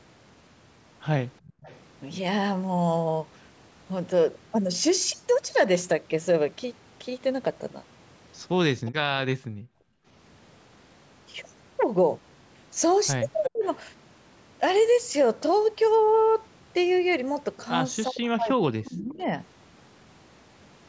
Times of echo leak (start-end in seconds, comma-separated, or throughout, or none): 1.45-1.79, 8.86-8.92, 13.43-13.50, 18.84-19.14